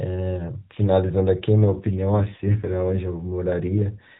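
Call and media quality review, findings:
AMR rate drop, 1.61–2.98 s: link adaptation cuts codec rate, bits shifted to error protection; speech rougher, more synthetic, fitting 12.2 to 5.9 kbps; band unchanged, no gap.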